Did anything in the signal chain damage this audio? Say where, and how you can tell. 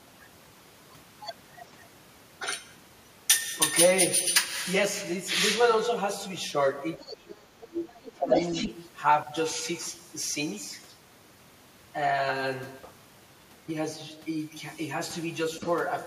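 Yes, in call processing. Between 6.98 and 8.31 s the speech sinks, by up to roughly 25 dB and for about a second in total, while another voice overlaps. This is speech suppressed in double talk, likely an echo canceller attenuating everything it couldn't separate.

The other side's voice leaking through appears at 7.06–7.16, 7.32–7.66, 7.87–8.12, 8.3–8.75, 12.82–12.88 and 15.58–15.71 s. Mostly it sits well below the talker, but at 8.3–8.75 s it reaches about equal level. Loudspeaker echo was likely not fully cancelled from the microphone.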